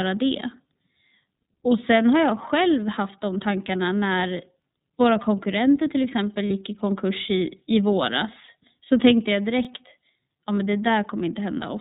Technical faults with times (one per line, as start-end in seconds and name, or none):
0.00-11.81 iLBC codec
4.62-4.65 overlapping chunks
6.48-6.52 lost iLBC frames
8.45-8.49 lost iLBC frames
9.65-9.67 overlapping chunks